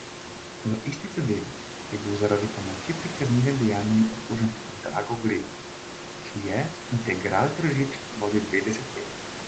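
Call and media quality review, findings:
No faults heard in this call speech.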